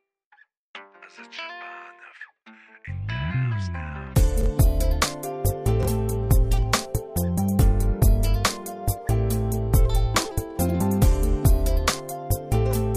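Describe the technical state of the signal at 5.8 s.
At 5.8 s the signal has chunks out of order. Between 5.83 and 5.88 s, two neighbouring blocks of about 23 ms each play in swapped order. The later one comes first, and the earlier one arrives one chunk late. No audio is missing. The sequence is simply wrong, with hard joins at the swap. It sounds like a brief jumbled moment.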